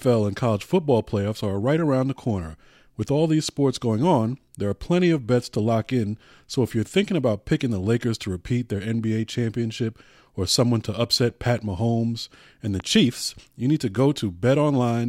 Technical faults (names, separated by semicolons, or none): loud pop